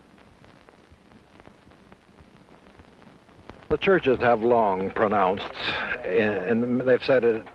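At 1.39 to 1.41 s the sound jumps abruptly forward with no gap, the two sides butted almost directly together. This is a skip ahead: a stretch of roughly 0.4 s was dropped while later audio was already queued, cutting the delay by about the same amount.

From 1.48 to 2.38 s the audio runs noticeably fast, about 114% speed at unchanged pitch, sounding hurried. This is a jitter buffer speed-up: the receiver trimmed many short pitch-period pieces, removing around 0.15 s to shrink the excess buffered delay. Through both faults the top end stops near 12 kHz, consistent with a call codec such as Opus.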